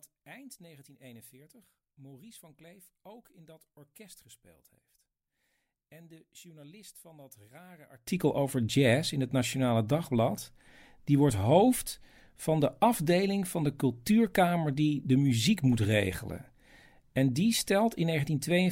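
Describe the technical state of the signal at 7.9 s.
One channel inverted, from 0.0 to 8.07 s, just before "over jazz in het": the sound drops by about 25 dB and turns faint. This likely comes from reversed polarity on one stereo channel, so the shared centre content cancels when summed to mono.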